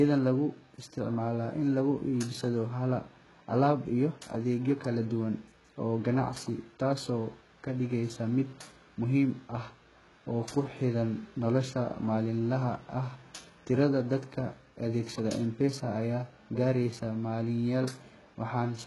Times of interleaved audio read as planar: none

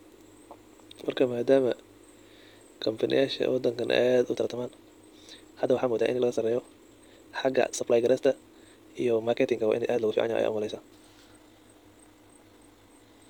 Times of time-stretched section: 4.30-13.29

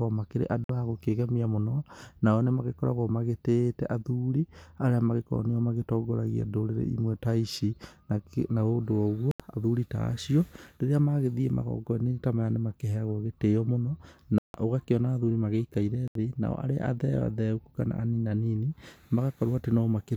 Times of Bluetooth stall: 0.64-0.70, 9.31-9.40, 14.38-14.54, 16.08-16.15

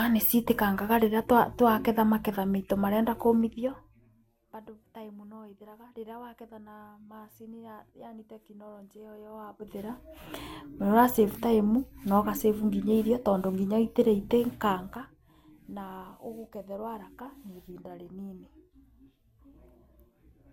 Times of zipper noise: 3.33-4.22, 9.17-10.20

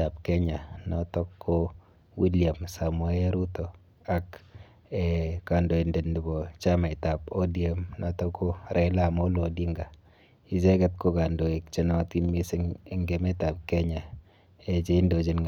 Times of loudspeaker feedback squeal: none

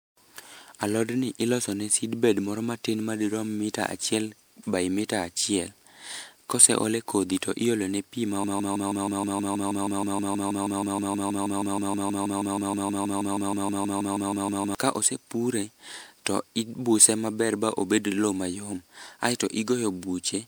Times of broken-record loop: 8.44-14.75

